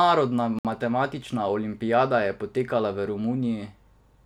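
A Bluetooth stall at 0.59 to 0.65 s cuts the speech to silence for 61 ms, just before "matematična olimpijada je potekala". This is likely the headphones' buffer running dry while interference held back packets, leaving a gap until the resent audio arrived.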